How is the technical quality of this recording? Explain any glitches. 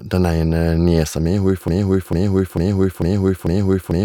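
The recording breaks down partway through with a broken-record loop. From 1.68 s to the end, the playback or stream likely stalled and kept resending its last buffered fragment, so a 0.45 s slice of speech repeats exactly five times back to back, and the speech that should follow is lost.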